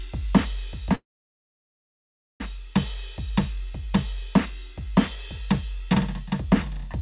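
At 0.95 s the music stops and goes silent until 2.41 s, then resumes where it left off. This is likely a call audio freeze, with delayed packets emptying the jitter buffer.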